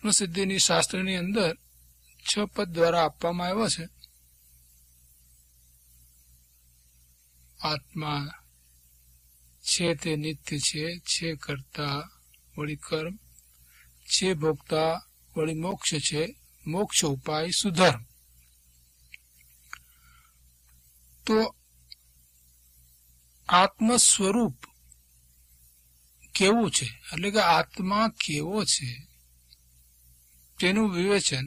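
At 15.71 s there is a block of digital silence lasting 8 ms: the output buffer likely went unfilled and the samples dropped to zero with no fade, so it is heard as a single tick. The waveform shows a flat gap; the spectrogram shows a thin vertical broadband line.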